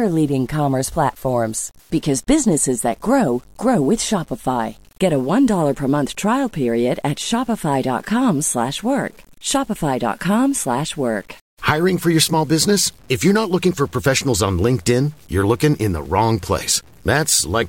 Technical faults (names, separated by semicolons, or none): low bit depth without dither